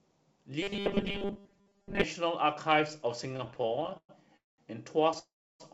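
From 0.62 to 2.03 s, robotic sound from repeated short buffers turns the speech into a rigid 200 Hz buzz, likely from replaying a 5 ms chunk over most of the real audio. Between 3.24 and 4.11 s, repeated stalls (stutter) make the speech drag: the jitter buffer keeps emptying, inserting about 307 ms of filler, with the longest gap 112 ms, while nothing is lost. Two call audio freezes follow, at 4.37 to 4.60 s and 5.19 to 5.62 s. Delayed packets likely let the buffer run dry, so the sound fades to near silence for about 190 ms and 320 ms, then resumes where it stopped. The audio has nothing above 8 kHz, as expected on a G.722 call path.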